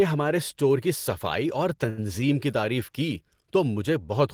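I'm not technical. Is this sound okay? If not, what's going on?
No. At about 1.89 to 2.00 s, just before "کی تعریف کی", one sound drags with a faint buzz or dip. This is a short stall from a late packet: audio arrived late, so playback stretched the last sound for about 80 ms, then continued with nothing lost.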